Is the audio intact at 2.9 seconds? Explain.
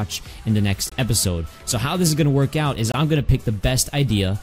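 No, there's a gap between chunks from 2.92 to 2.94 s, a short hole of about 23 ms. The audio seems to arrive in 2-second chunks, and silence gets slipped in at the join. Nothing's actually lost; it's just briefly interrupted.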